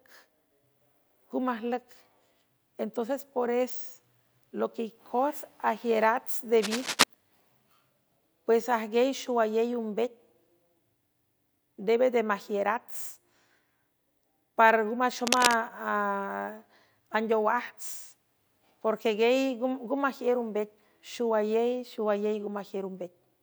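Cable scratch noise appears from 6.57 to 7.04 s and 15.24 to 15.54 s: dense, ragged rustling roughly as loud as the speech, likely from a worn cable or connector being moved.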